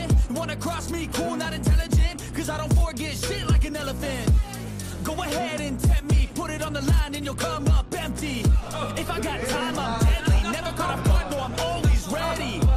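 From start to finish the sound is dull and muffled, with a gurgling, granular roughness that never lets up. The upper frequencies come and go, and what remains carries a coarse, grainy distortion. This is likely MP2 compression at a low bitrate, plausibly around 80 kbps. With bits that scarce, the encoder shuts off whole upper sub-bands and quantises the surviving ones crudely, giving the flickering top end and the watery texture heard throughout.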